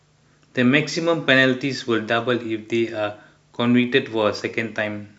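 Two devices likely running on unsynchronised clocks, about 500 ppm apart, drop or repeat a single sample roughly every 40 ms. From 0.12 s to 5.16 s, these clock slip clicks form a faint, steady rattle of about 25 ticks per second beneath the speech.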